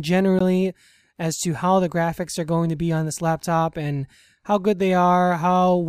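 At 0.39 s, a gap at a join of encoded pieces appears. Separately encoded segments were joined untrimmed. About 16 ms of silence cuts in, then sound resumes.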